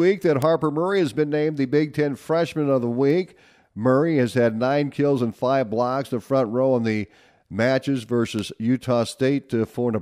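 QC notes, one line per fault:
0.42 s, 3.10 s, 8.39 s: bit error spike. A single flipped bit in memory or a digital link throws a few samples far off by a power of two and back, giving a sharp broadband tick unrelated to the speech, peaking at about -8, -20 and -14 dBFS. Each is so brief it fits a glitch only one to three samples long.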